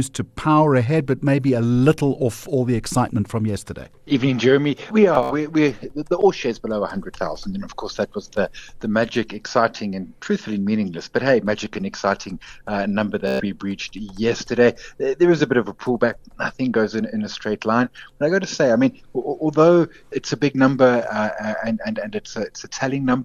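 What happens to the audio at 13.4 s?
A Bluetooth stutter runs from 13.28 to 13.45 s. Late packets made the receiver replay its last buffer, producing a buzzing repeat before the sound resumes further on.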